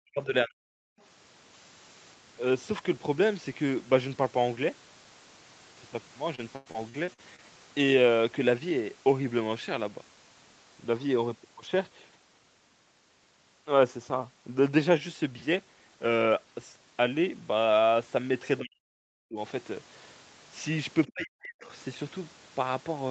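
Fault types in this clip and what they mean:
speech suppressed in double talk: The echo canceller, likely faced with both ends talking at once, could not tell the near talker from the loudspeaker echo and pulled the whole signal down along with the echo. The talker's speech sinks by something like 40 dB or breaks into fragments for roughly half a second to 0.7 s each time, at the very start (0 to 0.64 s), at 18.6 to 19.39 s and at 21.09 to 21.72 s.
background gated by the echo canceller: While sound came from the loudspeaker, the echo canceller clamped the microphone hard to keep echo from leaking back. Between 0.92 and 1.0 s the room tone underneath drops by about 40 dB for a brief moment of around 70 ms, then returns as soon as the canceller releases. It comes across as a short hole in the background.
repeated packet loss (robotic sound): From 6.35 to 7.43 s, audio packets kept going missing or arriving too late. 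The receiver covered each hole by stretching the last sound it had, but the next hole came soon after. There are seven breaks, the longest 96 ms, totalling about 260 ms lost and 277 ms patched, which is about a quarter of that stretch. The speech turns choppy and robotic, with pieces dropped out.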